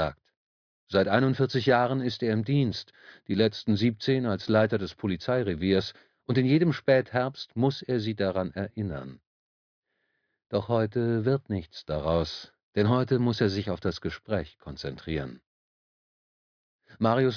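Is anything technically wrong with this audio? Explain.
No technical faults detected.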